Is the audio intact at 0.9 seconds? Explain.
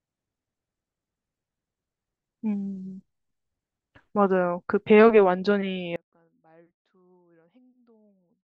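Yes, the speech is intact at 0.9 seconds, with no dropout, click, distortion or other fault audible at that moment.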